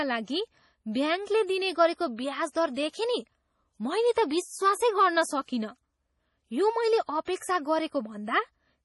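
Throughout, the speech has nothing above 11.5 kHz and sounds heavily watery, with swirling, chirpy sibilants and smeared onsets. The likely cause is MP3 compression at a low rate, which fits a bitrate around 32 kbps, where the encoder drops the treble and switches weak frequency lines on and off between frames.

From 7.25 to 7.27 s, a short hiss of about 25 ms runs ahead of an attack. This is pre-echo: the codec spread quantisation noise sized for the loud onset across the quiet moment before it, leaving the attack soft.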